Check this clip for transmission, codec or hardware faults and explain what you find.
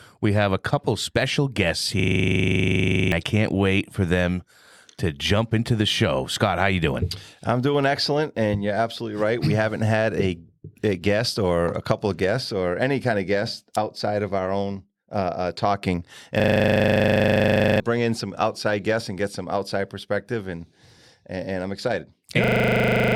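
The speech is interrupted by a system hang loop three times: 2.0 to 3.12 s, 16.4 to 17.8 s, and 22.44 s to the end. Each time, a frozen driver left the hardware replaying one 40 ms buffer. That makes a rasping 25 Hz stutter, and roughly 1.0 s, 1.5 s and 0.7 s of speech are lost in turn.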